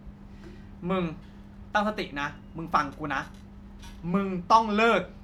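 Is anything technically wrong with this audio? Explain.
No, nothing stood out as technically wrong on listening to this speech recording.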